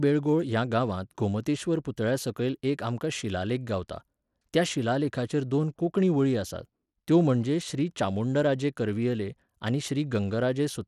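From start to finish the speech carries a gritty, grainy haze. The upper treble thins out and flickers rather than holding steady, and aliasing rides on the sound. Nothing at all sits above about 20.8 kHz. The damage is plainly audible throughout and points to Bluetooth SBC compression, likely at a starved setting near 96 kbps. There, the weak top sub-bands get too few bits and the rest are only coarsely quantised.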